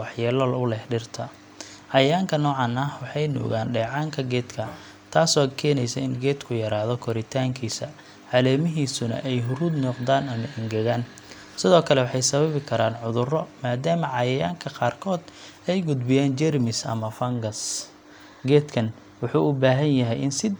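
No technical faults can be heard anywhere in the recording.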